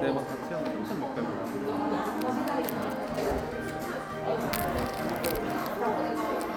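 GSM signalling bursts interrupt this everyday-sound recording from 2.68 to 3.4 s: a nearby 2G phone's radio bursts, rectified by the audio circuit, produce galloping ticks and 217 Hz buzzing, roughly 15 dB below the sound.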